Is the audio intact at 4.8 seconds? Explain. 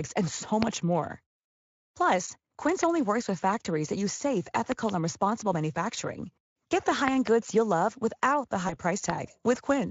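No. A loud pop hits from 4.72 to 4.91 s: two sharp thumps, about 20 dB above the speech, which continues beneath. The likely cause is a sudden electrical pulse.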